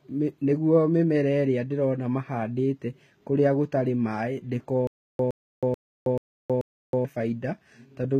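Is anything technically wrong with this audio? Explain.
Yes, there are two problems in this speech.

Throughout the clip the treble has a gritty, metallic edge, and s sounds come out lispy. Nothing reaches above 14.8 kHz. The likely cause is HE-AAC compression at a low bitrate, probably around 20 kbps. The codec keeps only the lower spectrum and fills the top by copying lower bands upward under a coarse envelope. Unlike a plain low-pass or MP3 dullness, the highs stay bright but sound synthetic, because their harmonics don't line up with those below.

From 4.87 s to 7.05 s, right after "mahandĩte kũrĩa gũtarĩ maaĩ", there is a stutter with silent gaps. A 116 ms fragment plays, then about 319 ms of digital silence follows, repeating every 435 ms for five cycles. Playback likely stalled and replayed its last buffer on each retry. Dropout concealment smears or fades the sound, but here the burst repeats identically at an even pace, and the audio that belonged to that stretch is lost.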